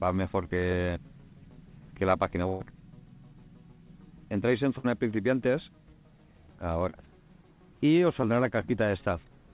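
The audio has travelled over a call link, and nothing above 4 kHz survives, which fits a narrowband G.711-style codec. Two bursts of packet loss occur, at 2.48 to 2.62 s and 4.78 to 4.86 s. About 120 ms and 60 ms go missing. The receiver stretches the last sound into a fading buzz or hiss, then jumps ahead. Two short concealed packet losses follow, at 6.90 to 6.96 s and 8.22 to 8.25 s. Roughly 40 ms and 20 ms never arrived in time. Each gap was patched by extending the preceding sound, leaving a brief smear or wobble.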